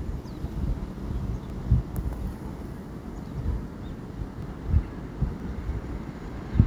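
At 0.53, 1.5, 3.45, 4.42, 5.4 and 6.37 s the sound skips abruptly, a few tens of milliseconds lost each time: audio missing between chunks, likely from one-second processing blocks. Unlike a dropout, no silence fills the gap, and the skips recur at a steady spacing.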